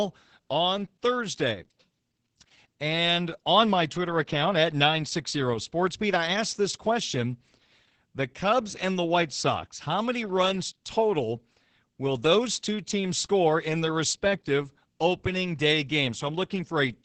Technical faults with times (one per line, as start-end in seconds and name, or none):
0.00-17.04 Opus voice compression